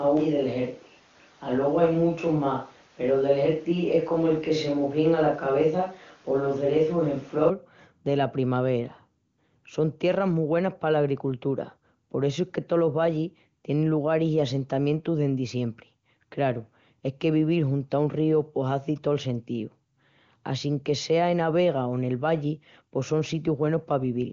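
From the very start until 7.49 s, the speech sounds roomy and hollow, thin in the bass, with a faint room noise sitting well below it. It then snaps back to a close, full sound. This is most likely a switch to a distant microphone, with a farther pickup standing in for the close one. The level barely changes. What separates it from added reverberation is the lost low end and the abrupt return rather than a tail fading away. The wideband codec's top limit near 7.4 kHz stays the same throughout.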